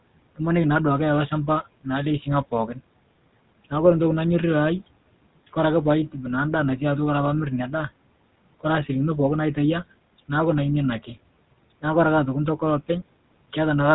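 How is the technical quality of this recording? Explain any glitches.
The whole thing has been through a GSM full-rate codec, and you can plainly hear it from start to finish. That old phone codec models the vocal tract and drives it with a coarse, regularly spaced pulse train, keeping only a fraction of the excitation detail, which fits its roughly 13 kbps budget. The result is that buzzy, gravelly roughness on the voice, and everything above about 3.9 kHz is simply gone, so sibilants and airiness go dull. The room noise, sitting about 23 dB under the speech, comes through that same narrowed band.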